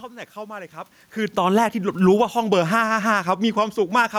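Automatic gain falling runs from 1.28 s to 4.14 s. The gain control judged the input too loud, or its background noise too strong for the gain it started with, and eased its gain down by about 4 dB, so the level sinks gradually and the room noise underneath drops along with it.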